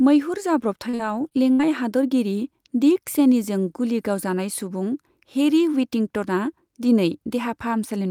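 Repeated packet loss (robotic sound) runs from 0.89 to 1.61 s in this speech clip. Over that stretch the stream keeps dropping out, and each hole is papered over by stretching the last bit of sound before the next one arrives. There are four short holes, the longest about 62 ms, with roughly 156 ms filled in this way, about a fifth of the span. That is what gives the passage its choppy sound, with pieces missing.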